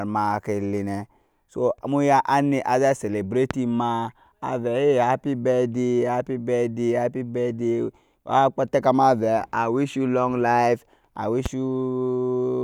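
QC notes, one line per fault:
3.51–3.53 s and 11.46–11.48 s, loud pop: a single sharp pop each time, about 15 dB and then about 10 dB above the speech, each lasting about 26 ms. The likely cause is a sudden voltage pulse, such as static or a switch or connector transient, added to the signal and briefly shaped by the circuits after it. Unlike a dropout click, the speech carries on unbroken beneath each pop, with no gap or missing audio.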